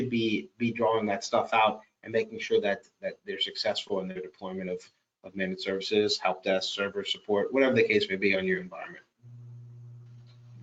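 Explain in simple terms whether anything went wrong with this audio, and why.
Two brief glitches stand out: a tiny smear or wobble at about 2.47 to 2.51 s, and another at about 4.11 to 4.17 s. This is short concealed packet loss. Small chunks of the audio, about 20 ms and then about 40 ms, arrived too late to be played. The receiver covered each gap by stretching the sound just before it, then blended back into the real audio, leaving a quick blur instead of silence.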